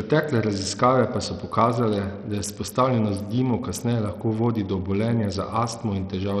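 From start to finish, the speech has a dull, gritty top end. The treble keeps dropping out and flickering back. A coarse, sandy noise rides on the voice, with aliasing above it. The likely cause is Bluetooth SBC compression at a starved setting. The damage is heavy and fits a bitrate near 64 kbps. Too few bits reach the weak upper sub-bands, so they vanish or sputter. The remaining bands are quantised roughly.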